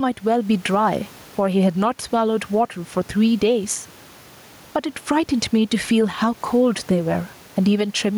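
Gain pumping runs throughout this speech recording. The room noise sits about 34 dB below the speech, and the gain swings by roughly 10 dB, ducking under each loud syllable and squashing the dynamics. The likely cause is input gain set far too high, with a fast limiter or compressor repeatedly clamping it down.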